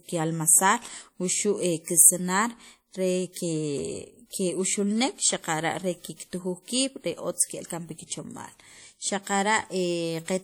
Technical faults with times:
0.00-10.44 WMA compression

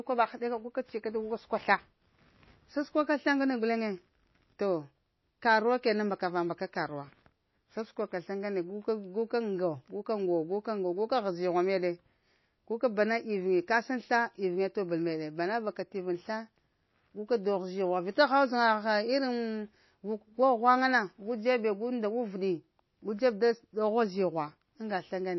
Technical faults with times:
0.00-25.39 MP3 compression

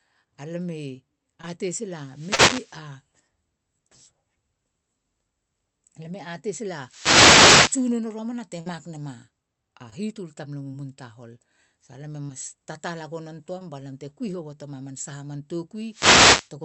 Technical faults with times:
1.41-1.45 short concealed packet loss
2.05-2.82 wireless microphone noise hit
2.35-2.40 short concealed packet loss
6.81-7.91 wireless microphone noise hit
8.60-8.68 burst of packet loss
9.90-9.93 short concealed packet loss
10.71-10.75 short concealed packet loss
12.27-12.31 short concealed packet loss
13.59-13.62 short concealed packet loss
15.89-16.51 wireless microphone noise hit

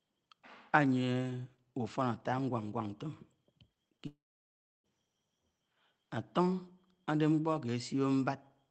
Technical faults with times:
3.73-4.01 short concealed packet loss
4.07-4.86 long network dropout

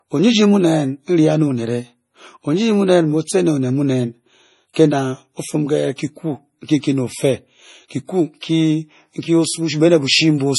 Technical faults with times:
0.00-10.58 low-bitrate audio saved at a high bitrate

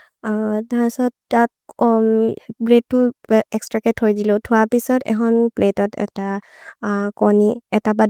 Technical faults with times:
none

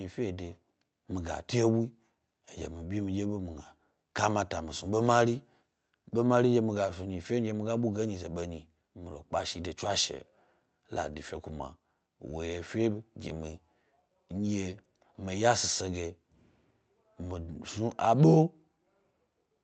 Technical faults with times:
none

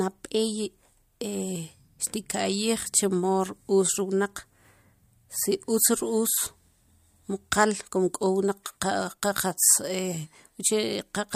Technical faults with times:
none

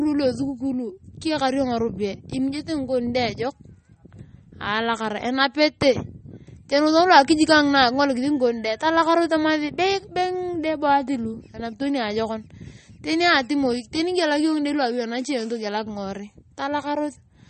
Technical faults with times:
0.00-17.50 MP3 compression

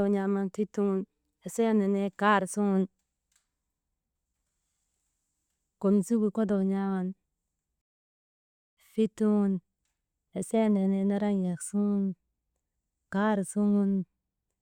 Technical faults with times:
7.81-8.77 rebuffering stall

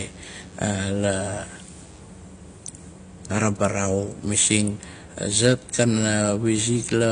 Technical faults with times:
0.00-7.11 AAC compression
0.00-2.00 DECT cordless phone buzz

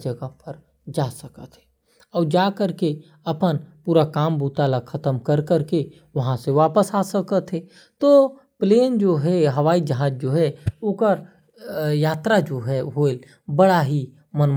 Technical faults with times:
none

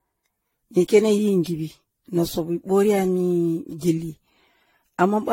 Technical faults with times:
0.00-5.33 generation loss

